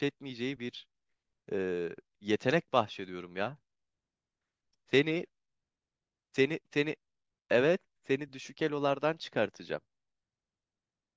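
Listening to this speech recording, nothing technical stood out.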